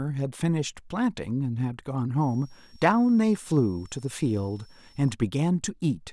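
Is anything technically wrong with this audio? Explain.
Yes. From 2.21 to 5.11 s a switching supply whistle sits behind the speech: a power supply pulsing in audible burst mode leaks a faint tone, around 35 dB down, wandering between 5.4 and 5.7 kHz. That drifting pitch separates it from a steady test tone or low, fixed mains hum.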